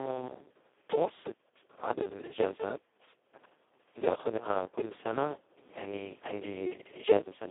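Speex codec damage runs through the whole of this speech recording. The speech sounds hoarse, noisy and close to robotic, which points to Speex at its lowest setting, near 2 kbps. At that rate the CELP coder has almost no bits for the excitation and behaves nearly like a vocoder. The sound is confined to a narrow telephone-style band of about 250 Hz to 3.5 kHz, with nothing at all above 3.8 kHz. Periodic USB or driver dropouts run from 0.07 s to about 7.2 s, roughly seven of them, evenly spaced every 1.02 s. Each is a short tick where a few milliseconds of audio, around 4 ms, are skipped outright rather than filled with silence. This happens when a recurring background task stalls the USB bus or audio driver on a fixed schedule.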